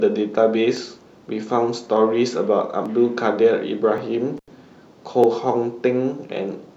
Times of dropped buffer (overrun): 0.77, 2.86, 3.98, 5.24

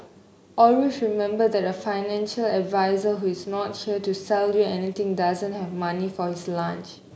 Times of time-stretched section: none

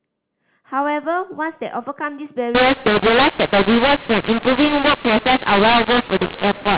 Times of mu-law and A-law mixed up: 2.55-6.78

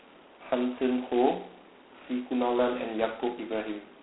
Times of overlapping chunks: none

